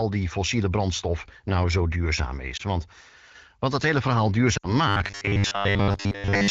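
At 2.58 s, just after "brandstof nou zo duurzaam", one lost AMR speech frame gives a brief dip. From 4.57 to 4.74 s, after "wat dat hele verhaal", a run of three frames drops to near silence. These are decoder concealment gaps, not a steady buzz.

From 4.88 to 6.50 s the speech turns into a rigid, metallic 100 Hz buzz, the robotic sound of repeated short buffers. It likely comes from a 10 ms buffer replaying while most of the real audio is skipped.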